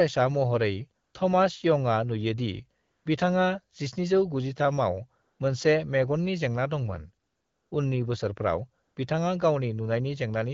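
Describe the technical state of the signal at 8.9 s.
At 8.9 s the signal is in an AMR comfort noise gap running from 8.83 to 8.95 s, about 120 ms. The phone treated the talker as silent and stopped sending speech frames, so the receiver filled the pause with synthetic noise built from a rough level and spectral shape. The real background is swapped for a smooth, steady hiss. On a spectrogram this shows as a flat, uniform noise band with abrupt edges, and on the waveform as a low, even-textured stretch.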